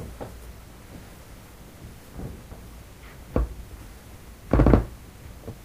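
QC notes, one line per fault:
No faults found. Nothing in the audio needs flagging.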